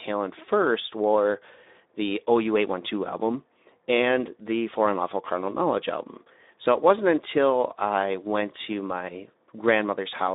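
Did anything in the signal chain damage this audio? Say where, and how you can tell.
Yes. Throughout the clip the speech sounds hoarse and grainy, with a noisy, buzzy texture on every voiced stretch. The band is narrow, roughly 250 Hz to 3.7 kHz, with nothing above 3.8 kHz. This is damage at the codec stage, from the Speex codec, a CELP coder at a setting that fits about 11 kbps. At that rate it has too few bits to model the excitation faithfully, so the harmonic detail is replaced by a rough, noise-like approximation.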